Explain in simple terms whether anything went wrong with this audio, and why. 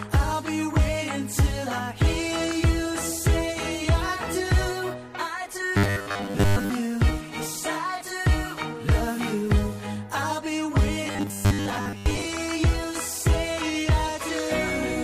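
Two stretches of robotic sound from repeated short buffers, 5.77 to 6.69 s and 11.07 to 12.25 s, become a flat 100 Hz buzz, likely from 10 ms snippets looping while new audio ran late.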